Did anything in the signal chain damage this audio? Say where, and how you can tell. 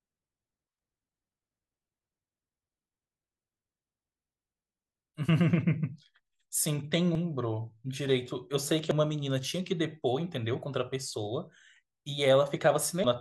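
Yes. The damage sits at the codec stage, from damaged data in a compressed stream. Short glitches cut into the speech at 7.15 s, 8.91–8.94 s and 13.04–13.07 s. Corrupted bytes made the decoder misread frames, lose sync and search for the next valid frame header.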